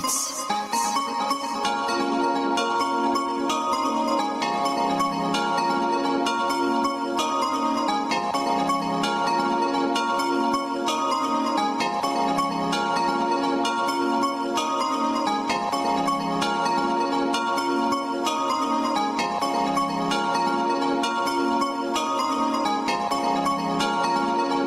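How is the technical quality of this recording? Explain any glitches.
The recording has one clear problem that runs the whole way through: gain pumping. The level swings by around 10 dB, leaving everything squashed, most likely from input gain set far too high with a fast limiter clamping down.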